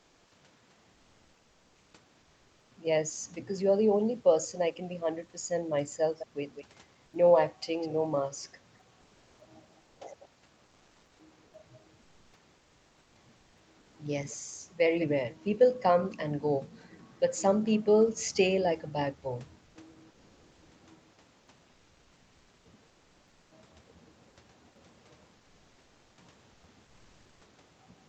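Comfort noise in place of the background appears in six short pauses: 0 to 0.31 s, 7.05 to 7.13 s, 13.79 to 13.95 s, 19.65 to 19.75 s, 26.53 to 26.63 s and 26.85 to 27.41 s. The room background, about 36 to 41 dB below the speech, gives way to a smooth, featureless hiss, up to about 3 dB quieter. The likely cause is the Opus codec's discontinuous transmission halting during silence while the receiver synthesises noise. On a spectrogram these gaps show uniform, grainless texture up to the 8 kHz ceiling. In the waveform the noise floor dips slightly and flattens.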